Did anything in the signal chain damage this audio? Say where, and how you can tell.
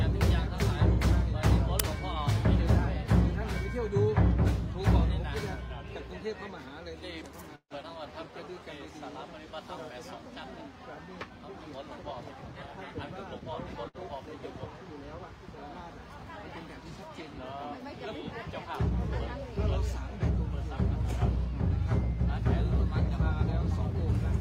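Yes. At the driver or buffer stage, an uninitialised buffer was sent to the output before any audio had been written into it, so stale memory contents were played as if they were samples. At 1.80 s there is a loud crack lasting about 5 ms, which fits one small block of garbage data. It is far too sudden and harsh to be anything in the source material.

Between 7.55 s and 7.72 s the sound stops moving forward. The last moment is held on as a fading buzz or hiss, then drops to silence for about 60 ms, and afterwards the audio resumes exactly where it left off with nothing skipped. That is a call audio freeze, likely from packets held up on the network until the jitter buffer ran dry. It inserts about 151 ms of gap and pushes everything after it later by the same amount.

Immediately afterwards, from 7.82 s to 7.85 s, there is short concealed packet loss in the network and decoder path. About 40 ms of audio never arrived in time. 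The receiver patched the hole with only about 8 ms of extrapolated sound before blending back in, so what you hear is a brief smear or wobble where content is actually missing. This also claws back roughly 30 ms of the delay built up by the freeze.

From 8.12 s to 8.60 s the jitter buffer slow-down rebuilds its reserve. The receiver repeats single pitch periods and small slices of pauses, adding about 42 ms over that stretch. Playback runs at about 93% speed while the pitch stays put, so sounds are drawn out slightly and can carry a faint warble. That is the signature of time-stretching rather than a tape-style slowdown.

Between 12.29 s and 13.40 s the opposite happens: a jitter buffer speed-up. The buffer was holding more than its target, so the receiver cut out short pieces one or a few pitch periods long, about 70 ms in all. The audio plays at roughly 106% speed with unchanged pitch and sounds a little hurried, with rhythm compressed over just over a second.

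At 13.89 s to 13.96 s there is a short stall from a late packet. The packet missed its playout deadline, the buffer emptied, and the receiver stretched the last sound for about 60 ms until the packet turned up. Nothing is lost, but one sound is held unnaturally long with a slight buzz or dip, and the overall delay grows by 60 ms.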